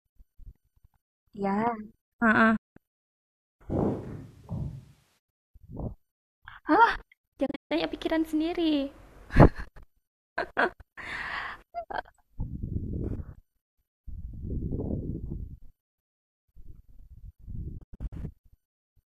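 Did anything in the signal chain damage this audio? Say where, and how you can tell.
Yes. Digital broadcast dropouts at the reception stage cut the sound to silence with very fast fades: one clean hole of about 0.19 s at 2.56–2.77 s, then scattered holes at 7.46–7.71 s (longest 0.14 s) and 17.78–18.13 s (longest 0.1 s). The receiver muted on failed frames, and what was sent during the gaps is lost.

From 3.72 to 5.17 s the sound turns abruptly roomy and hollow, with faint room noise well below the speech but no real level drop, then snaps back. This points to a switch to a distant microphone at the capture stage, likely because the close microphone's feed dropped out.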